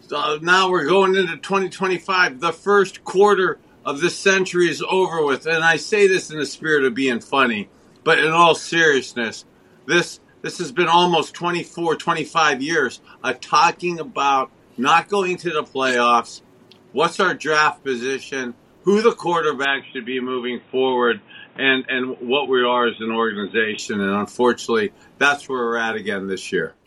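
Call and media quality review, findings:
Input switched to a poorer device, 19.65–23.79 s; likely a capture-device or headset-profile change. Narrower capture path cuts everything above 3.8 kHz: dull, boxy sound. No gap at either switch, level roughly unchanged. Different noise floor appears, about 30 dB below signal, then full bandwidth returns.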